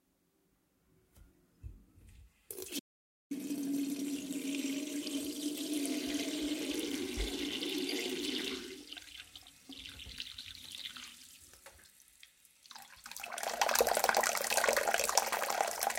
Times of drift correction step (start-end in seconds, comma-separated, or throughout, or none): none